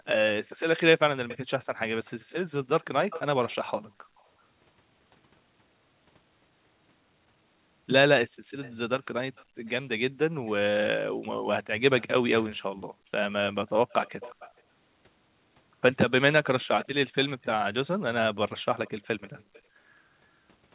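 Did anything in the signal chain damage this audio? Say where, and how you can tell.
Yes. A faint copy of the speech trails 364 ms behind at 1.28–4.24, 8.62–14.61 and 16.81–19.62 s: echo leak, likely a far-end speakerphone whose canceller passed residual echo.

The room sound drops out, by about 22 to 37 dB, at 0.0–0.06, 3.88–4.16, 8.28–9.58, 12.78–13.11 and 19.44–19.79 s. This is background gated by the echo canceller, which clamps the microphone during loudspeaker playback.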